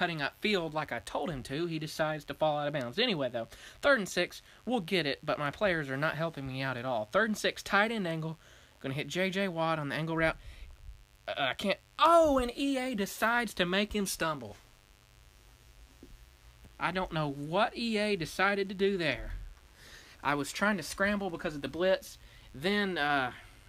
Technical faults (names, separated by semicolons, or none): mains buzz